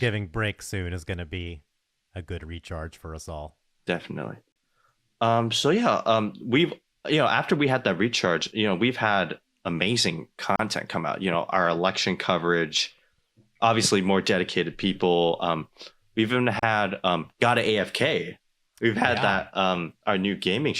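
Speech with a gap at a join of encoded pieces recurring every 6.0 s: about 37 ms of silence at 4.52 s, then 34 ms at 10.56 s after "know we've had amazing" before "come out", and at 16.59 s between "we've even" and "um got a". Separately encoded segments were joined with their encoder start delay and last-frame padding left in. On a waveform each shows as a flat dropout with steep, slightly smeared edges; a spectrogram shows a narrow full-band vertical blank.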